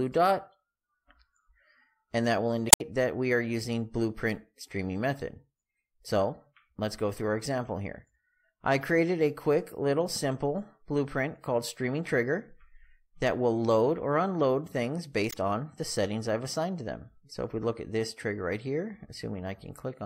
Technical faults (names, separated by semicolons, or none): damaged data in a compressed stream